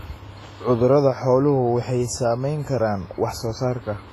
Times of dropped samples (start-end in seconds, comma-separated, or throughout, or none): none